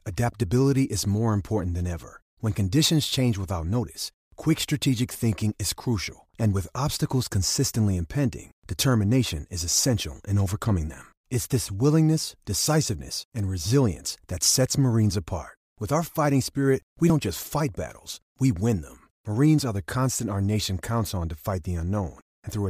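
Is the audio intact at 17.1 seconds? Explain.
No. At 17.10 s there's audio missing between chunks. Right after "our fighting spirit we" the sound skips straight into "just fight battles we", with around 30 ms gone and the two sides butted together. The likely cause is processing in 6-second chunks that drops a sliver at the handover.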